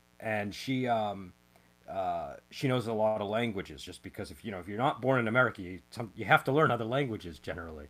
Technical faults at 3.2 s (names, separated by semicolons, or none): mains buzz; short stall from a late packet